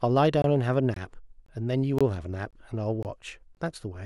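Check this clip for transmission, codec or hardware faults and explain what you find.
The speech has a repeating gap between chunks: seven short holes at 0.42–0.44, 0.94–0.96, 1.46–1.48, 1.98–2.01, 2.51–2.53, 3.03–3.05 and 3.55–3.57 s. Each is about 21 ms of silence after every half-second chunk, likely from padding or late chunk starts at the joins. Nothing is missing, but you hear a hard-edged stutter every 0.5 s or so.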